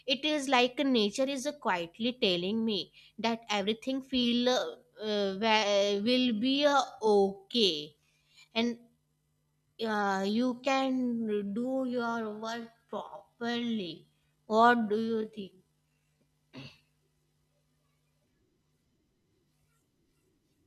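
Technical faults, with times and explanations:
4.13 to 16.31 s, time-stretched section: after "telling me that everything", speech slows to 0.635× at unchanged pitch and drags, likely from repeated short pieces.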